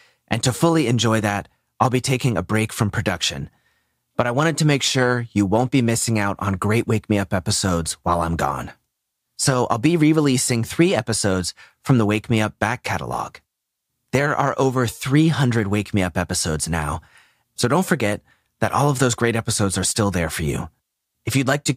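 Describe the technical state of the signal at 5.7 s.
At 5.7 s the speech signal is intact, with no audible fault at that point.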